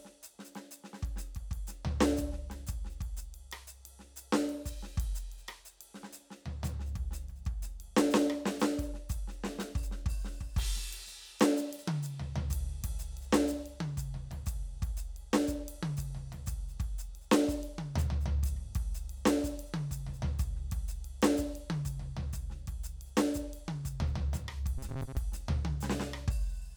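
From 24.78 to 25.17 s, robotic sound from repeated short buffers: a 134 Hz buzz, likely looped 7.5 ms slices, seen as cloned waveform cycles.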